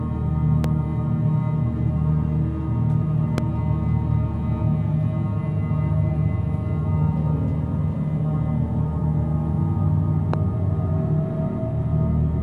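A sudden voltage step, most likely from a plug, switch or static discharge, briefly entered the signal path three times, producing a loud pop at 0.64 to 0.66 s, at 3.38 to 3.40 s and at 10.34 to 10.36 s. Each is a single sharp thump lasting about 20 ms and rising roughly 15 dB above the surrounding sound, the middle one somewhat softer at around 10 dB. The sound carries on underneath each pop.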